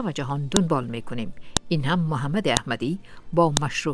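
Sharp clicks at 0.57, 1.57, 2.57 and 3.57 s, one per second, are a file header played as audio: each joined piece's header bytes sound as a snap, a thin vertical spike in waveform and spectrogram.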